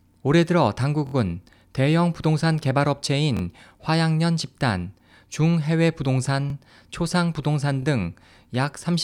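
Speech with repeated buffer stutters at 1.07–1.14, 3.37–3.41, 6.50–6.53 and 7.83–7.85 s. Late data made the device replay a 23 ms chunk, which fits a 1024-sample buffer, with hard joins.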